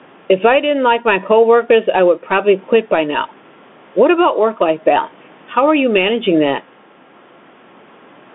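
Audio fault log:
throughout, gain pumping: the room noise, about 41 dB below the speech, swells in pauses and ducks roughly 10 dB under each loud syllable, likely from excessive gain with a fast limiter.
throughout, Bluetooth CVSD headset codec: nothing above 3.8 kHz survives, s sounds turn scratchy and granular hiss sits underneath, as one-bit up/down steps lag loud high sounds, fitting a 64 kbps link.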